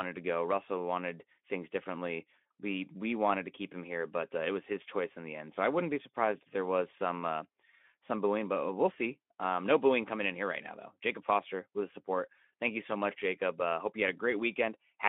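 No technical faults are audible.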